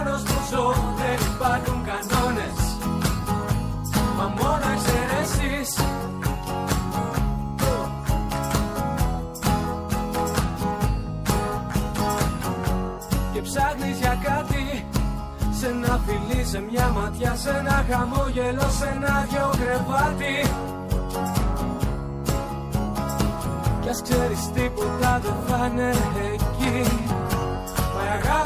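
No technical faults can be heard anywhere in the audio, and the signal stays steady and intact throughout.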